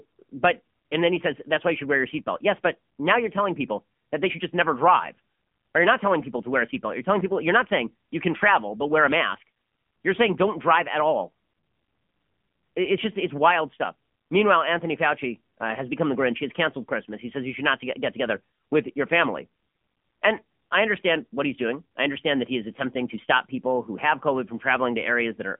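Throughout, the speech has passed through the AMR narrowband mobile codec (AMR-NB) at a low bit rate, which fits roughly 7.4 kbps. Only a 200 Hz to 3.4 kHz band survives, and the codec's sparse pulse model makes the voice plainly buzzy, thin and synthetic.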